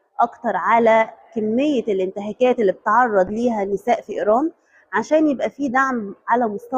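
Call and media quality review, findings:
Call bitrate drop, 3.28 s to end of clip. Symptom: sound turns coarser and rougher, with no recovery before the clip ends. Probable component: sending-side encoder under bandwidth-estimate control. Mechanism: bandwidth estimate fell, so the encoder was given a much smaller bit budget and coded with coarser quantisation. Degradation fits a step from about 64 to 27 kbps, held at the lowest level for about 1.4 s.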